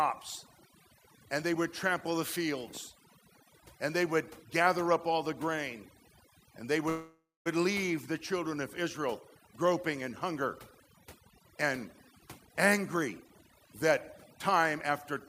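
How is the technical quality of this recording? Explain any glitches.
The technical quality is poor, with heavy processing throughout and two kinds of timing glitch later on.

Overdone noise removal runs through the whole speech clip. A noise reducer set too hard cuts any frequency band near its noise estimate, so quiet speech detail goes too. The background drops and breaks up into twinkling specks. A spectrogram would show a blank floor dotted with isolated bright flecks.

A call audio freeze runs from 6.89 to 7.48 s, likely caused by delayed packets emptying the jitter buffer. The receiver stretched the last sound into a fading buzz or hiss that ends in about 230 ms of silence. Speech then resumes where it stopped, so nothing is lost, but it arrives 563 ms late. On a waveform this looks like a decaying tail and a flat gap.

Jitter buffer speed-up occurs twice, from 12.20 to 13.93 s at 122% speed and from 14.34 to 15.13 s at 109%. 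The receiver trimmed short pitch-period pieces to cut surplus delay, removing about 0.4 s in the first stretch and well under a tenth of a second in the second. The speech sounds hurried at unchanged pitch. Syllables look compressed in time on the waveform.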